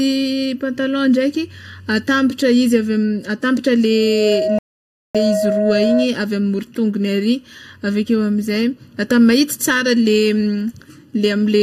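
A hollow, phasey quality runs through the whole speech clip, with a notch around 700 Hz and further dips spaced evenly up the spectrum. This is channel delay (comb filtering). One channel arrives a fraction of a millisecond later than the other, and when the two are summed to mono, the content they share cancels at regularly spaced frequencies. A delay that short puts the first notch near 700 Hz, right in the body of the voice.

Just after "ave atabatra", at 3.89 s, a single tone near 634 Hz rises out of the speech. It swells over a little under half a second into a steady squeal about 10 dB above the signal and holds until it stops at 6.10 s. This is loudspeaker feedback squeal. A microphone is picking up the loudspeaker it feeds, and at 634 Hz the loop gain exceeds one, so that frequency keeps reinforcing itself on each pass around the loop.

Inside that squeal, at 4.59 s, the audio drops to silence and resumes at 5.15 s exactly where it left off, with nothing skipped. 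This is a rebuffering stall. The player ran out of downloaded audio and paused until more arrived, adding 0.56 s to the timeline without losing any of the recording.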